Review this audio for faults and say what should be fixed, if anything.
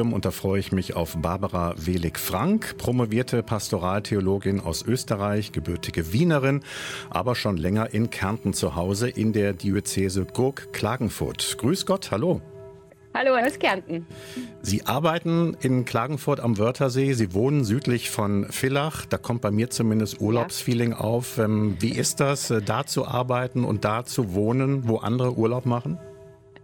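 There's a USB whine from 7.73 s to 12.01 s, a steady fixed-pitch tone built on 1 kHz, with its strongest component up at 16 kHz, sitting roughly 35 dB below the signal. That's the bus pulling current in 1 ms frames, and the ripple sneaking into the audio through a shared power or ground path, so you get the frame rate and a stack of its harmonics. To prevent it, power the interface separately or add a USB isolator or ground-loop break between the computer and the audio gear.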